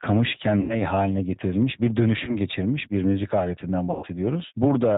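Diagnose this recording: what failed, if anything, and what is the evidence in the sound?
Throughout, the speech sounds slightly rough and synthetic, with a plainly audible reconstructed edge and nothing above 4 kHz. This is the G.729 codec at 8 kbit/s, the G.729A variant, working at the codec stage. It does not carry the waveform itself. It rebuilds each 10 ms frame from a vocal tract filter, a pitch predictor and a handful of pulses, so fine texture is replaced by a model and the top of the band is cut off.

At 0.61 to 0.76 s, 2.25 to 2.36 s and 3.91 to 4.07 s, the speech smears into a fading buzzy tone or coloured noise and stays weak before recovering. The first gap falls just before "haline getirilmiş bir". The second sits between that phrase and "geçirmiş bir müzik aletinden", and the third follows that phrase. This is VoIP packet loss concealed by the speech codec, a network fault. 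The missing stretches are 80, 20 and 120 ms, which points to four, one and six lost packets. The decoder repeated its last pitch and filter at falling gain, and because each frame builds on the previous one, the distortion lingers after packets resume.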